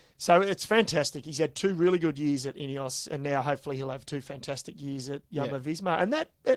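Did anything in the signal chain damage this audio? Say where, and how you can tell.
Yes, at the codec: Opus voice compression throughout. The sound fits roughly 16 kbps hybrid mode, whose coarse excitation coding leaves the speech plainly hoarse and slightly robotic.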